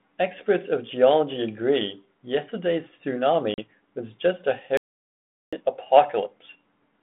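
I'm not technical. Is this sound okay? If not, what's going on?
No. Packet loss on an ADPCM call at 3.54 s: a couple of small chunks of the call vanished, leaving a 40 ms gap, and the speech comes back slightly distorted for a moment. Playback stall from 4.77 to 5.53 s: the sound cuts out for about three quarters of a second, likely because the player ran out of data, then carries on.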